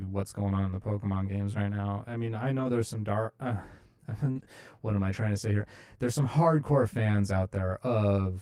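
Throughout, one channel arrives roughly 20 ms late and the two are summed to mono, so channel delay (comb filtering) carves evenly spaced notches from about 30 Hz upward, leaving the speech rough or slightly doubled.

From 2.59 to 2.65 s, after "now I mean I" and before "there's some dark", a lost packet was rebuilt from error correction. The 40 ms fill fits two lost packets replaced by low-bitrate copies, so there is no gap, but that stretch sounds rougher and noisier.

At 4.31 to 4.37 s, just before "what am I trying", 40 ms never reached the decoder in time. The short concealed packet loss was bridged by extending the preceding sound, heard as a brief smear.

That is followed from 4.35 to 4.45 s by another lost packet rebuilt from error correction, about three packets' worth. The coarser copies make those 60 ms grainy and noisy.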